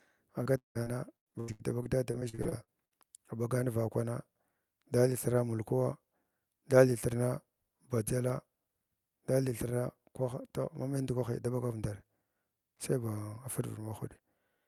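From 0.43 to 2.97 s, repeated packet loss (robotic sound) turns the speech choppy. Concealment stretches the last sound across 18 gaps of up to 176 ms, rather than leaving a single dropout.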